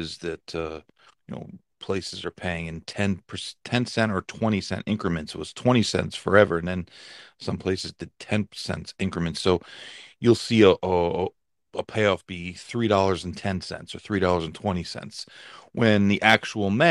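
Nothing is technically wrong with this speech recording.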